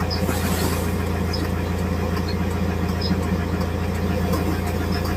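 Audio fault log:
No faults detected in the recording.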